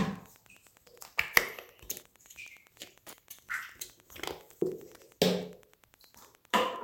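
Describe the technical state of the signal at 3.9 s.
At 3.9 s you're hearing Wi-Fi interference, and it runs through the whole clip rather than just that moment. A Wi-Fi radio close to the audio circuit sends its beacon every 102.4 ms, and the circuit rectifies each burst into the audio path. That gives a steady ticking at roughly ten clicks a second, sitting well under the sounds, around 30 dB down.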